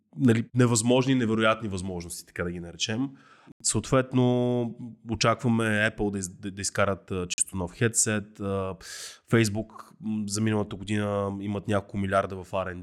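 Speech with two silent holes, at 3.52–3.62 s and 7.34–7.40 s. They show as flat waveform and blank spectrogram columns, likely from a Bluetooth dropout.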